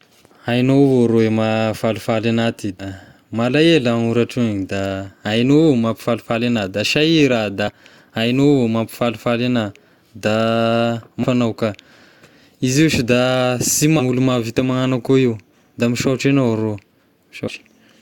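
Compressed frames skipped at 2.79, 7.67, 11.23 (just before "agnao ka"), 13.99 and 17.47 s. Whole blocks of the coded stream never reach playback, so the speech jumps ahead by roughly a tenth of a second, or a fifth at 11.23 and 13.99 s. That fits runs of 20 ms frames dropping out.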